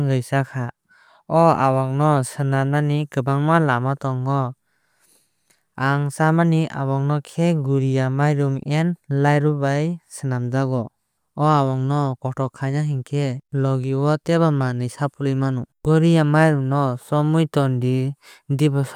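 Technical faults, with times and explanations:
No technical faults can be heard in this recording.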